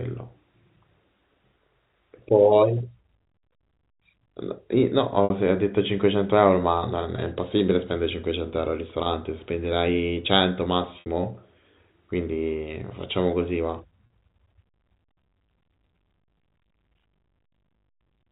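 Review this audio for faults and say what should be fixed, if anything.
Packet loss with pitch repetition occurs six times in the speech: 2.78–2.80 s, 7.16–7.18 s and 9.04–9.06 s (20 ms each), 14.07–14.10 s (40 ms), and 5.24–5.30 s and 11.00–11.06 s (60 ms each). The durations fit 20 ms packets going missing singly or in runs. Each time, the receiver fills the hole by looping the last pitch cycle of the G.711 A-law stream. The 20 ms gaps sound like a brief buzzy hold. The 60 ms gaps decay toward silence before the speech cross-fades back in. On a waveform, identical cycles repeat with shrinking amplitude. On a spectrogram, the harmonics run as frozen horizontal lines that fade out, then normal speech resumes. To prevent it, reduce loss on the network path with QoS priority for voice or a deeper jitter buffer, or add forward error correction so lost packets can be rebuilt rather than concealed.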